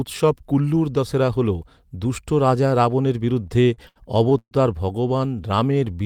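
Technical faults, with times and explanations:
3.43–4.53 s, repeated stalls (stutter): The sound halts eight times in just over a second. Each halt holds the last sound rather than dropping to silence. The longest lasts 133 ms, and the stretched portions total 298 ms, roughly a quarter of the span. Nothing is lost, so the speech drags and stutters forward. Packets were arriving late, the jitter buffer kept running dry, and the receiver extended the previous sound until fresh audio arrived.
5.42–6.04 s, jitter buffer slow-down: The speech runs slower here, at about 85% of normal speed, yet the pitch stays unchanged. Sounds are drawn out, and the passage gains 102 ms in total. The jitter buffer was low on stored audio or had just raised its target delay, and needed a reserve. To build one, the receiver repeated single pitch periods and fragments of pauses many times in a row. This lengthens the speech without shifting its pitch.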